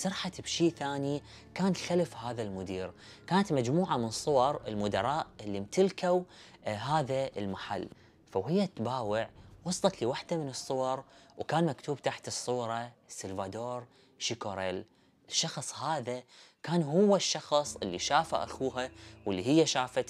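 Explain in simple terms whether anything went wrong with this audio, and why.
Nothing went wrong here.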